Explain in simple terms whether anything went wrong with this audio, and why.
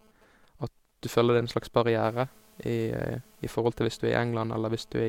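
From 2.04 to 3.54 s, just before "til hvis du", a steady, even hiss sits under the speech. This is low bit depth with dither, consistent with about 9 bits. Dither turned the rounding errors into smooth noise, avoiding the gritty distortion of plain truncation.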